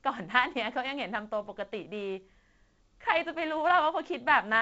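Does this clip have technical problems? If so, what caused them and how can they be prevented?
No, there's nothing here that needs fixing: it's speech carried over G.722 wideband telephone coding at 48 kbit/s, with the sound reaching up to about 7.7 kHz, so there's nothing to prevent.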